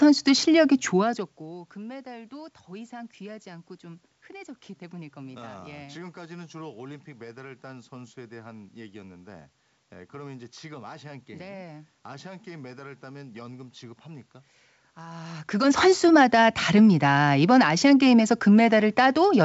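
No technical faults can be heard in this speech recording. The G.722 wideband telephone coding limits the band, leaving nothing above about 7.7 kHz.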